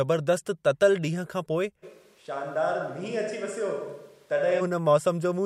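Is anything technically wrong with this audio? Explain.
Yes. A switch to a distant microphone occurs from 1.85 s to 4.60 s. The close microphone's feed seems to drop out, and the audio is likely picked up by a microphone farther away, such as one on a camera. The voice abruptly turns roomy and hollow, thinner in the bass and about 5 dB quieter, with room noise rising to around 35 dB below the speech. At 4.60 s it snaps straight back to the close, fuller sound.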